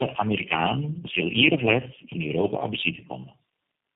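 From start to finish the speech sounds rough, muffled and warbly, with a grainy, smeared texture and nothing above 3.8 kHz. This is tandem speech coding. The call crossed three separate speech codecs in a row, AMR-NB and then G.729A twice, with G.711 links between them. At each border the audio was decoded and re-encoded, so every coder worked on the previous coder's damaged output. The losses stacked beyond what any single codec would cause.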